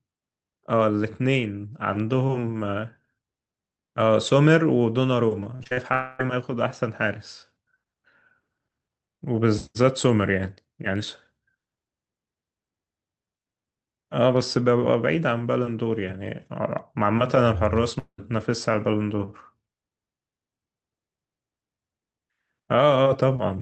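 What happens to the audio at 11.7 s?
Nothing goes wrong at 11.7 s; the speech there is intact, with no dropout, click or distortion at that point.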